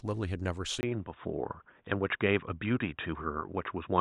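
At 0.81 s the speech breaks for about 20 ms, then continues duller and boxier, with nothing above 3.8 kHz, a flat ceiling on a spectrogram. A faint new noise floor appears, about 50 dB below the speech, which stays at roughly the same level. Likely the input switched to a poorer device.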